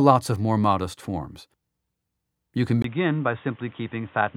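At 2.82 s the sound changes abruptly and stays changed to the end: after a gap of about 20 ms it comes back dull and boxy, with nothing above 3.8 kHz, roughly 5 dB quieter, and with a new background noise sitting around 30 dB below it. This is likely an input switched to a poorer device. A simple low-pass filter would not bring the gap, the level drop and the fresh noise all at once.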